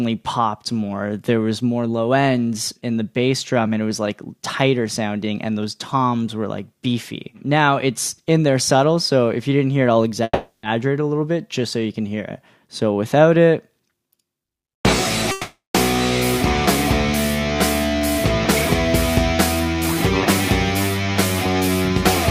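At 10.23 s the sound stalls until 10.66 s, a call audio freeze. Packets were likely held up, so the receiver stretched the last sound into a fading buzz for about 0.4 s, then resumed where it stopped. Nothing is lost; a gap is inserted.

From 13.80 to 14.81 s comes a jitter buffer speed-up. The receiver trims pitch-period slices to shed the built-up delay, about a fifth of a second here. Playback runs at 123% with unchanged pitch and sounds hurried.

At 15.31 s a second call audio freeze begins, ending at 15.77 s. The held sound fades into about 160 ms of silence before the audio picks up again.

Milder speed-ups follow at 19.33 to 19.75 s, at 109%, and 20.97 to 21.75 s, at 108%. Both are briefly rushed.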